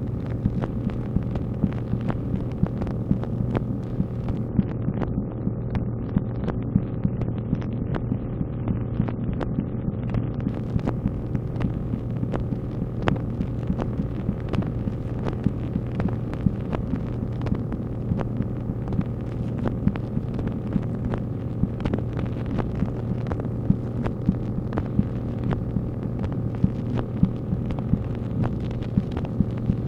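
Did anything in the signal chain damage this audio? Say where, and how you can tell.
Yes. Between 4.49 and 10.49 s the top end suddenly cuts off above 11.7 kHz and codec smearing rises, with no gap at either edge. That's an adaptive stream at a lower bitrate, sounding like AAC falling from 96 to 48 kbit/s while the network slowed, then recovering.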